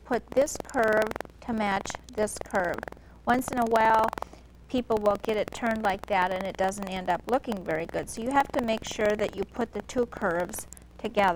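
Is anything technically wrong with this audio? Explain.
Yes, buffer tearing runs throughout: a steady rattle at 21.5 Hz, which fits a 2048-sample buffer. Writer and reader have slipped, so a small slice of each period replays audio from about a fifth of a second earlier. Unlike underrun dropouts, nothing goes silent, and the buzz disappears with the signal.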